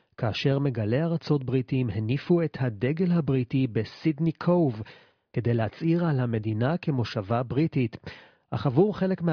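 Nothing goes wrong anywhere in this bit of speech; there's simply no technical fault to point out.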